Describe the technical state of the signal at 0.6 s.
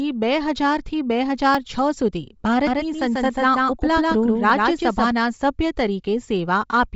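Bluetooth LC3 compression runs throughout, including 0.6 s. The speech has a grainy, breathy edge and nothing above 7.7 kHz, likely from a low-bitrate LC3 encode that fits 32 kbps.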